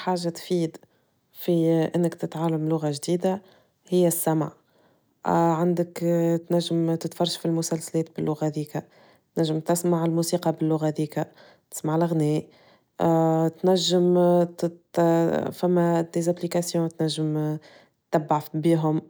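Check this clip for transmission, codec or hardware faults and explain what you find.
Nothing in this speech recording points to a transmission, codec or hardware problem, so there's nothing here to chase down.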